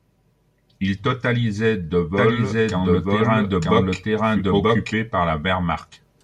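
From 2.17 s to 4.93 s the speech carries a doubled audio track: a second, full-band copy runs about a second behind the original at roughly the same loudness. It has no reverberant tail or room colouring, so it reads as an overlapping repeat rather than an echo. The copy cuts in and drops out abruptly at both ends. The likely cause is the signal being captured again through a slower path and mixed back in.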